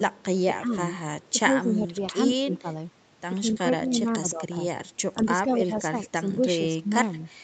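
At 0.15 to 0.24 s, 1.21 to 1.32 s and 5.75 to 5.8 s, a faint copy of the speech trails it by 154 ms. This is echo leak, likely from a far-end canceller letting loudspeaker pickup through. It sits about 35 dB under the speech, rising to about 20 dB under at 5.75 s, and it adds sound rather than removing any. Across 0.47 to 0.78 s, 1.28 to 2.68 s, 3.4 to 4.45 s, 5.22 to 6.46 s and 6.77 to 7.19 s, the speech instead dips in pieces by roughly 10 dB, and by roughly 15 dB in the last stretch. This is speech suppressed in double talk, likely an echo canceller ducking the talker while both sides spoke, and it is heard as missing level, not as a repeat.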